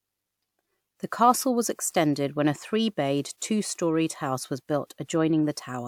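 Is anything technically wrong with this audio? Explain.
No, nothing technically wrong can be heard here.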